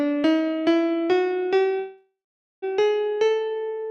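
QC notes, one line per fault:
1.79–2.64 s, call audio freeze: the last sound carries on as a fading buzz or hiss for about 0.4 s, then 0.44 s of silence, likely from delayed packets draining the jitter buffer. Unlike a dropout, nothing is lost; playback resumes where it stopped, 0.83 s later.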